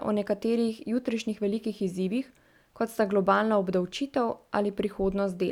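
A short speech recording, and nothing in it sounds technically wrong, so there's no problem to pin down here.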